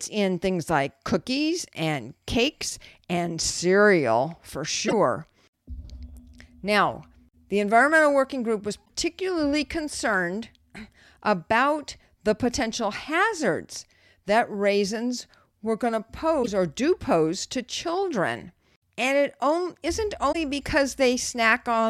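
At 4.87 s after "cakes and cereal for", 8.84 s, 16.42 s before "or do pose to", and 20.31 s after "it on not", the speech jumps ahead with a 44 to 56 ms glitch, about two 26.1 ms frames. The likely cause is a broken MP3 bit reservoir: frames after a cut decode from another frame's bytes. A spectrogram shows a thin smeared column, and the waveform shows an abrupt discontinuity.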